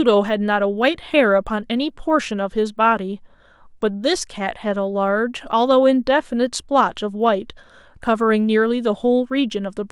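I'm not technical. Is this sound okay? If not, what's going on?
No. All the way through there's a faint buzz riding on the speech, and it's a resampler restarted on every block. The rate converter handles each 20 ms chunk separately, so every chunk edge leaves a tiny tick, 50 per second, heard only while sound plays.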